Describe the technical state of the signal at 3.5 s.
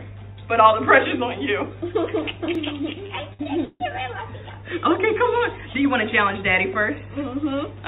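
At 3.5 s the signal is inside a burst of repeated stalls (stutter) running from 3.06 to 3.94 s. The jitter buffer emptied four times, and each wait was filled by stretching the last sound, the longest for 149 ms. On a spectrogram this shows as smeared, frozen horizontal bands capped at 4 kHz by the call codec. On the waveform it shows as repeated, fading segments.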